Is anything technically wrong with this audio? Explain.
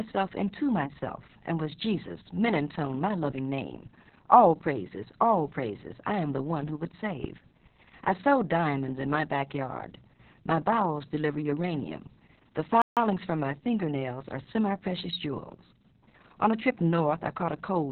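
Yes, there are two faults in this speech clip.

Opus voice compression runs throughout. Nothing is heard above about 4 kHz, which points to narrowband SILK coding at a very low bitrate, around 6 kbps. The coarse excitation coding leaves the speech muffled, hoarse and slightly robotic.

A playback stall occurs from 12.82 to 12.97 s, just before "from my fingernails are". The output goes silent for about 150 ms mid-flow, then resumes. The likely cause is the player running short of data or its thread being briefly blocked.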